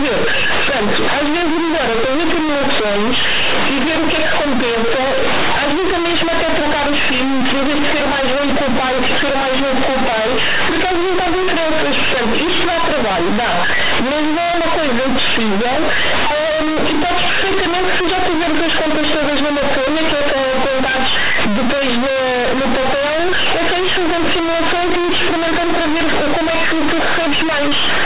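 From start to finish, the speech suffers from companded audio read as linear: mu-law bytes are being played as plain 8-bit samples without expansion. Every sign change flings the waveform across half its range, so soft passages come out as loud as peaks and pauses fill with harsh noise. The result is loud, buzzy distortion. Unlike ordinary clipping, it doesn't rise with level, and the narrow band beneath it still fits normal G.711 telephone coding.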